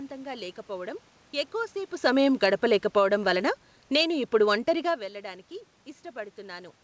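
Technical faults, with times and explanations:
2.27–5.02 s, automatic gain falling: after "లేకపోవటం ఎక్కువసేపు" the gain control, judging the input too loud or its background noise too strong, eases level down about 5 dB, the room noise sinking with speech, unlike a talker moving.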